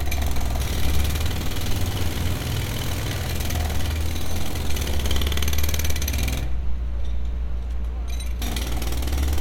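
No technical faults can be heard anywhere in this recording; the signal stays intact and steady throughout.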